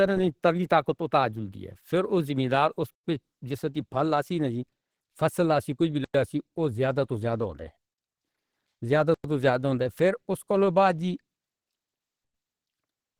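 A speech recording with a hoarse, grainy texture throughout: the speech sounds rough, and the tone has the muffled, hybrid-mode character of likely Opus compression at a low rate, consistent with about 16 kbps, though content still extends to 20.3 kHz. There is also a gap between chunks, 100 ms of silence, at 2.94 s (after "پھر او زمیندار اُس", before "پے جس"), 6.04 s (after "فصل لاسی کجھ وی") and 9.14 s (before "توں زیادہ ہوندا"). The three gaps recur every 3.1 s, so the audio was delivered in 3-second chunks with silence left at each join.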